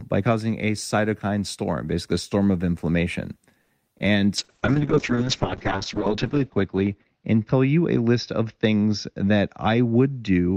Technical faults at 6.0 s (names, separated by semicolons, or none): call bitrate drop